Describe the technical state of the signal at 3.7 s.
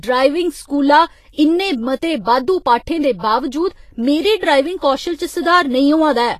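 At 3.7 s the speech carries the same damage heard across the whole clip, most likely from Vorbis compression at a low setting, consistent with a bitrate around 32 kbps. The encoder draws a smooth spectral floor and quantises the residue above it so coarsely that high-frequency detail turns into noise of similar energy, while nothing survives above 14.2 kHz. The result is plainly audible: a hissy, grainy top end, roughened tonal parts and softened, blurred consonant attacks.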